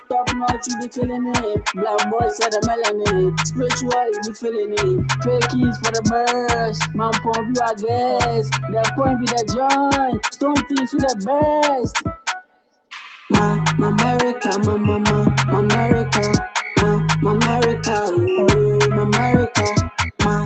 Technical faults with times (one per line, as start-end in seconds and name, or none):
0.00-20.46 noise suppressor applied to music or sounds
0.00-1.41 sound cut by the noise suppressor
4.16-4.52 sound cut by the noise suppressor
10.64-11.29 sound cut by the noise suppressor
12.00-12.92 sound cut by the noise suppressor
19.90-20.20 sound cut by the noise suppressor